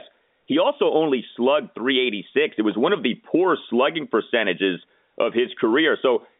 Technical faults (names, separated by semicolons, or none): none